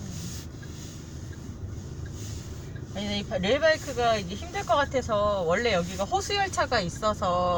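Nothing here sounds wrong at any point.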